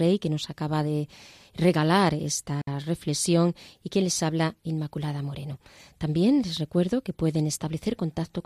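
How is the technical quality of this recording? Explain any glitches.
There is one glitch in the speech, at 2.61 s. It is a digital wireless dropout. The receiver lost data and muted for 60 ms, which leaves a clean near-silent hole with no noise burst.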